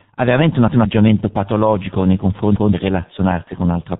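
G.723.1 codec, heavy damage throughout at about 6.3 kbit/s: the speech loses everything above 4 kHz and comes out muffled and hoarse. The codec's slow-moving voice model, updated only every 30 ms, smears consonants into soft, blurred edges.

Repeated buffer at 0.68 to 0.85 s and again at 2.56 to 2.73 s: each time new audio arrived late, so the device replayed the previous 171 ms chunk once, which fits an 8192-sample buffer. A stretch of speech sounds twice with a hard join, and roughly 150 ms of real audio goes missing.

VoIP packet loss concealed by the speech codec at 3.44 to 3.50 s: a 30 ms gap, which fits a single lost frame, is filled by the decoder extrapolating from its last pitch and filter at falling gain. The speech is briefly stretched into a buzzy tone or coloured noise that fades before the codec recovers.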